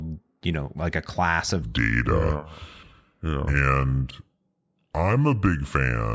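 A wrong sample rate fault runs from 1.62 s to the end of this speech clip. From that point the samples are read out more slowly than they were captured, with no conversion, so the speech drops to about 0.73 times its original speed and falls about 5.5 semitones in pitch at the same moment. Both shift by one ratio, which fits audio recorded at 22 kHz being played back at 16 kHz.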